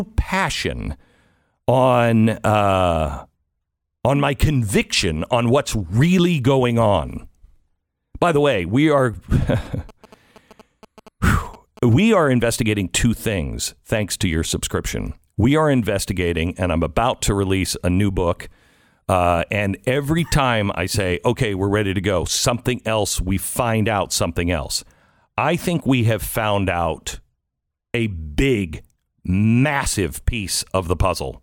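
Speech, with GSM signalling bursts from 9.42 to 11.94 s, between "the way we are" and "are investigating two things". Galloping ticks and short 217 Hz buzzes sit roughly 20 dB under the speech. A nearby 2G phone's radio bursts are being rectified by the audio circuitry.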